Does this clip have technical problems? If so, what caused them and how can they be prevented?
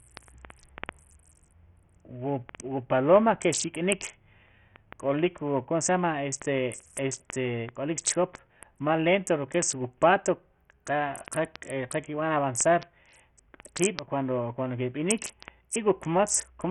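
Yes. Throughout the speech the treble stops dead at about 11.7 kHz, and what remains carries a heavy gritty grain with aliasing. The likely cause is Bluetooth SBC compression at a very small bit pool, which fits a rate near 48 kbps. SBC splits the signal into a few wide bands and starves the top ones of bits first, so the highs vanish and the rest is coarsely quantised. To prevent it, record over a wired connection, or use a higher SBC bit pool or a better codec.

From 0.12 s to 16.70 s there is a steady train of sharp, uneven ticks, roughly one every 50 ms, so about twenty per second and some three hundred in all. These are word clock ticks. The receiving device ran on its own clock instead of locking to the sender's digital stream, with a mismatch of roughly 400 ppm. Each time the two clocks slipped by one sample, a sample was dropped or repeated, leaving a click. To prevent it, slave the receiver to the incoming clock or a shared word clock, or use sample-rate conversion at the input.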